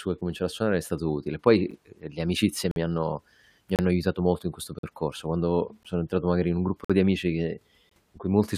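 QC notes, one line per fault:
1.71, 2.71–2.76, 3.76–3.79, 4.79–4.83, 5.83, 6.85–6.90, 7.89 s: gap between stream segments. The speech stops dead at one-second intervals, matching 1.0 s segment boundaries, because each segment's timestamps start slightly late and the player fills the hole with silence. Holes run about 7 to 51 ms, longest just before "di amici". No audio is lost. A waveform shows flat silent slots with abrupt edges. A spectrogram shows thin, fully blank vertical stripes.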